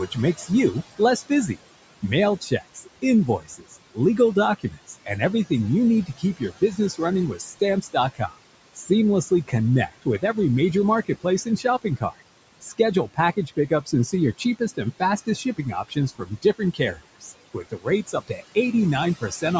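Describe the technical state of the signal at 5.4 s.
At 5.4 s the speech sounds swallowed, just before "you need". This is speech cut by the noise suppressor, which runs from 0.07 to 5.51 s. Around a second and a half of speech within that span was mistaken for noise and turned down with the background, by as much as about 17 dB.

Underneath, noise suppressor artifacts carry on here as everywhere in the clip. The suppressor pulls steady-noise bands down by about 21 dB frame by frame. It is working on room noise that sits about 15 dB below the speech.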